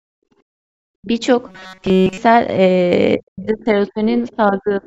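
From 0.00 to 0.68 s, the room sound is held down by about 40 dB, then returns. This is background gated by the echo canceller. While the loudspeaker played, the canceller clamped the microphone hard, and the room tone vanished with it.

Between 0.96 and 1.11 s the speech dips deeply. This is speech suppressed in double talk, likely caused by both sides talking at once. The canceller could not separate the talker from the echo, so it turned everything down.

From 1.48 to 2.18 s the sound becomes a rigid, metallic buzz at 188 Hz. This is robotic sound from repeated short buffers. The likely cause is late audio, covered by looping a fragment of about 5.3 ms, which repeats throughout and skips the real signal.

Double-talk suppression returns at 3.18 to 3.76 s, 3.92 to 4.03 s and 4.36 to 4.82 s. The first is a deep drop. The later two are shallower. Each time, the speech sinks.

At 4.26 to 4.32 s, a faint scrap of the other side's voice leaking through appears, far below the talker. 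The echo canceller likely left some loudspeaker sound in the microphone path. The lowest bass is missing, which fits the call microphone processing.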